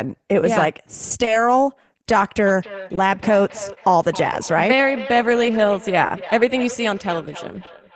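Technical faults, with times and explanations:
Throughout: clock drift between sender and receiver. The sender's clock runs roughly 1.5% slow, so the jitter buffer keeps draining and the timing hiccups recur unevenly.
1.25–1.30 s, 2.95–3.00 s, 4.45–4.50 s, 6.07–6.12 s, 7.65–7.70 s: short stall from a late packet. Each time the buffer runs empty and the last sound is held, with no audio lost.
2.46 s to end: feedback echo between two devices. A second device replays the speech into the microphone, so it returns about every 0.3 s, peaking about 15 dB below the speech.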